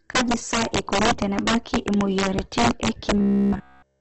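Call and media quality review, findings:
Integer overflow, whole clip: harsh cracks on loud speech peaks, sharper than clipping. Gain stage drives about 9 dB past full scale and wraps to the opposite sign instead of limiting, so a few percent of samples flip across the range.

Opus compression, throughout: grainy, rough speech with nothing above 8 kHz. Likely an Opus encode in CELT music mode, starved of bits at something like 12 kbps, with noise-filled bands instead of clean tones.

Robotic sound from repeated short buffers, 3.18 to 4.00 s, right after "eikoni tenebaki imuoyiaritin e": stiff metallic buzz at 66.8 Hz to the end. Practically every bit is a repeat of a roughly 15 ms chunk, which fits the playback path looping its last buffer while real audio is skipped.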